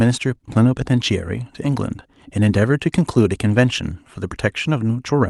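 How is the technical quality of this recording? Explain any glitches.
No glitches can be heard in this speech recording, with nothing that breaks or disturbs the sound at any point. It has come through a call codec and its top end stops at about 12 kHz, which fits Opus at a moderate bitrate.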